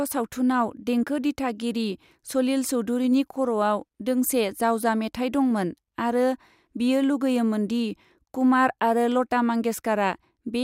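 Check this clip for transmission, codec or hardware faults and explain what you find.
I find no faults to explain in this speech clip.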